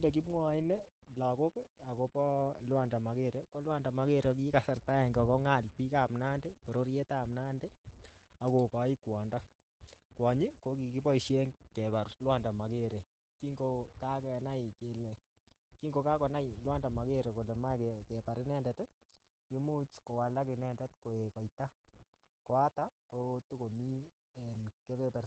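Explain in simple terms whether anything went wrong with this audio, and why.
Two things went wrong, and both last from start to finish.

A rough, gritty fuzz rides along with the speech the whole way through, getting coarser in the quieter moments and thinning to a sputter as sounds fade out. This is low bit depth without dither. The sound was likely stored with too few steps, about what 8 bits allows, and each value was simply rounded to the nearest step. That rounding error follows the speech instead of staying a steady hiss, so it sounds like grain stuck to the voice.

The speech also sounds muffled and slightly hoarse, with a faint robotic edge, and there is no crisp sparkle above about 8.6 kHz. This is Opus voice compression, in the mode built for talking. To save space, it stops keeping the highest frequencies and describes the voice's underlying buzz only roughly. That rough description is what makes the voice sound dull and a little machine-like.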